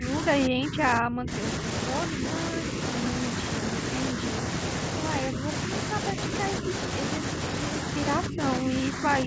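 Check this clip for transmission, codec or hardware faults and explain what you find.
The speech drops in level four times, at 0 to 1.42 s, 2.09 to 2.77 s, 5.26 to 6.7 s and 8.28 s to the end. The first dip is deepest, about 30 dB, and covers roughly a second. The later dips are shallower, about 5 dB twice and about 10 dB at the end, and last only fractions of a second. This is likely speech suppressed in double talk. The echo canceller heard both sides at once and turned the talker down with the echo.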